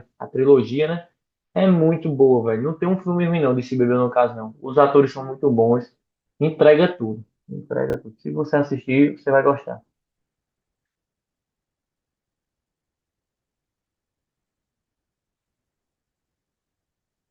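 At 7.9 s the speech briefly jumbles, up to 7.94 s. This is chunks out of order. One 10 ms chunk of audio arrived late. It played three chunks after its proper place. No audio is lost. The sequence is simply scrambled across those 40 ms. Each misplaced boundary forms a hard join. There are three of them. The result is a short garbled stutter.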